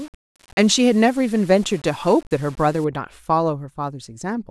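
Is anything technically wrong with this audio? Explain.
Yes. From 0.0 to 2.84 s the speech shows low bit depth without dither, likely from rounding to about 7 bits with no dither. The error tracks the signal at roughly 30 dB below the speech, so quiet syllables turn gritty. A waveform zoom shows stair-stepped levels, and a spectrogram shows broadband grain that vanishes in pauses.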